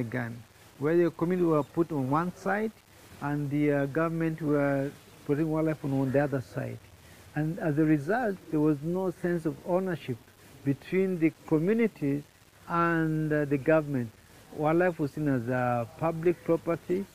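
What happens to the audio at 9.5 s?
Nothing goes wrong at 9.5 s; the audio runs straight through that point intact, with only the steady fine grain of its 8-bit storage underneath it.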